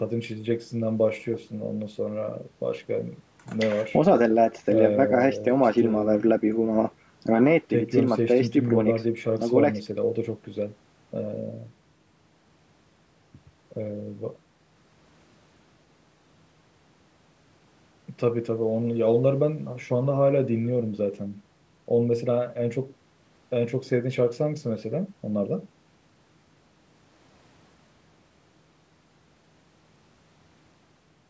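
No technical faults are audible.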